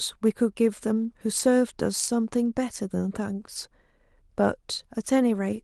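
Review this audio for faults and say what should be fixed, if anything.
Lost packet rebuilt from error correction, at 1.39–1.41 s and again at 2.45–2.47 s: each time a 20 ms stretch, consistent with one lost Opus packet, turns briefly rougher and grainier instead of dropping out. The following packet carried a low-bitrate backup copy of the missing audio, and the decoder played that copy in its place. This keeps the speech continuous, but the coarser backup shows up as short bursts of extra noise within an Opus stream that runs at 32 kbps with content up to 12 kHz. To prevent it, reduce packet loss on the network path, for example by prioritising the call traffic or moving off a congested or wireless link.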